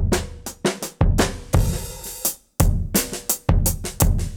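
From 2.04 s to the end, pre-emphasis is left on. The treble lift applied before recording or transmission, following the 50 µs FM curve, never meets its matching de-emphasis cut, so the high end stays raised: about 11 dB more at 10 kHz than at 1 kHz. From that point the sound turns abruptly thin and glassy, with the upper band pushed forward and sibilant energy hissing and spitting above the body of the audio.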